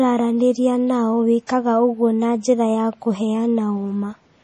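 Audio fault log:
Throughout: MP3 compression artefacts, likely from an encoder starved of bits, consistent with a low bitrate near 32 kbps. Nothing remains above 11.5 kHz, so the speech sounds dull. Weak frequency lines flicker between frames, giving heavy watery swirl, chirpy s sounds and smeared onsets.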